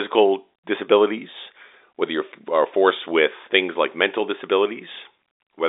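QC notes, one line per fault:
Nothing stood out on listening to this speech, which comes across with the narrow band of ordinary G.711 telephone coding.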